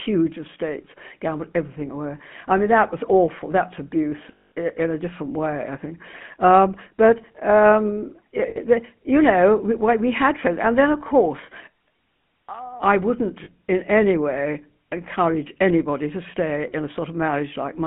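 GSM full-rate codec damage runs through the whole speech clip. The band is held to roughly 150 Hz to 3.4 kHz, and the voice has the buzzy, gravelly roughness of pulse-driven vocal-tract modelling, which fits the 13 kbps first-generation GSM coder.

Lost GSM frames occur at 4.32 to 4.52 s (200 ms), 8.50 to 8.58 s (60 ms) and 13.44 to 13.49 s (40 ms). The decoder repeats the last good frame, so the sound hangs as a rough, metallic ring.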